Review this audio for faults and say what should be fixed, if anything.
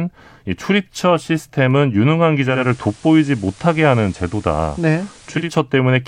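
Digital radio blending to analogue, 2.43–5.57 s: a 292 ms cross-fade to FM adds hiss about 30 dB down, while the waveform level stays steady. Prevent it with stronger digital reception or by disabling the receiver's automatic analogue blend.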